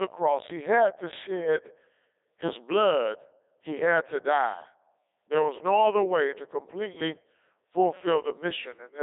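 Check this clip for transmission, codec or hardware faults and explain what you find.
The whole clip has passed through a Codec 2 vocoder, with heavy damage. The decoder receives only pitch, voicing, energy and a coarse spectral envelope, then rebuilds the speech from sine waves, so the original waveform is gone. The speech comes out robotic and buzzy, confined to a 300 Hz to 3.7 kHz band with nothing above 3.8 kHz. The density of the artefacts fits the 3.2 kbit/s mode.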